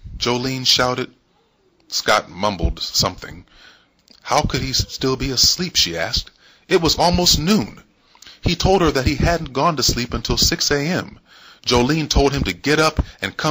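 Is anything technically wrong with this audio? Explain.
Yes, there's hard clipping all the way through. The signal's driven about 5 dB past what the stage can pass, so peaks get sliced flat, though only a tiny fraction of samples hit the ceiling. Those flat tops spray high harmonics, heard as brief crackle on the loudest moments.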